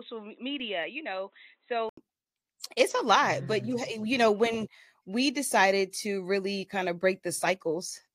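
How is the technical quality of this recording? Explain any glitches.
The recording has one clear fault, at the very start. From 0.0 to 1.97 s the input was likely switched to a poorer device, probably another microphone or a headset's call profile. That device passes nothing above 4 kHz, so the speech sounds dull and boxy, noticeably quieter by around 10 dB, and carries a faint background noise of its own, well below the speech. At 1.97 s a short gap of about 80 ms marks the changeover, after which the fuller sound returns.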